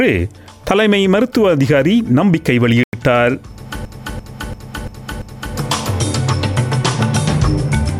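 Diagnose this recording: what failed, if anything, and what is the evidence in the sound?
The sound drops to silence for 96 ms at 2.84 to 2.93 s, then resumes. This is likely a Bluetooth stall at the playback link, where the headphone buffer ran dry awaiting resent packets.

From 3.85 to 5.56 s, one 341 ms slice repeats five times as a 2.93 Hz stutter. This is a system hang loop: a frozen driver left the hardware cycling a ring buffer that fits 16384 samples.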